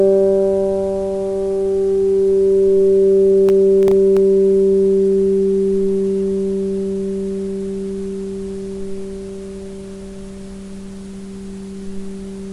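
A recording of sounds with a burst of processor overload crackle from 3.49 to 4.17 s. A handful of tiny silent gaps, each fitting a sub-millisecond buffer, leave hard edges. Unlike one dropout, it's a gritty cluster that stops once the load passes.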